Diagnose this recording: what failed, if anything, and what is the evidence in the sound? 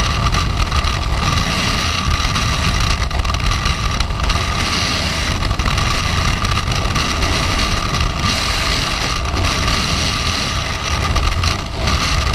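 The failure is at the codec/decoding stage: compressed frames skipped. At 3.39 s, 8.11 s and 11.96 s the audio jumps forward, losing about a fifth, a tenth and a fifth of a second. Whole frames were never decoded, so the jumps fall in steps of the 23.2 ms frame length. That length fits 1024-sample frames at 44.1 kHz. Unlike a network dropout there is no silent gap.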